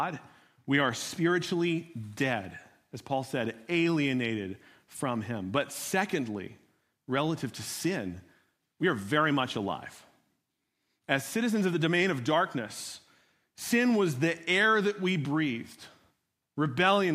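No technical faults are audible.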